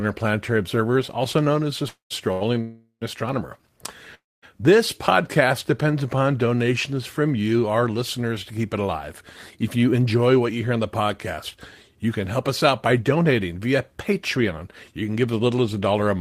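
Call audio freezes at 1.88 to 2.12 s, 2.61 to 3.03 s and 4.15 to 4.44 s: the speech stops and the last sound trails off as a fading buzz, ending in silence for about 0.13 s, 0.10 s and 0.22 s. These are likely due to delayed packets emptying the jitter buffer. The speech resumes where it stopped, with nothing lost but gaps of 221, 404 and 280 ms added.

A short stall from a late packet falls between the first two, at 2.32 to 2.43 s: one packet missed its slot, so the receiver held the last sound for 86 ms before continuing, a briefly stretched sound with a slight buzz.

Jitter buffer speed-ups follow at 9.76 to 13.53 s and 14.37 to 15.62 s, running at 107% and 109% speed. With the buffer holding too much audio, the receiver repeatedly dropped pitch-period-sized pieces, roughly 0.3 s and 0.1 s in total, so the speech sounds hurried at unchanged pitch.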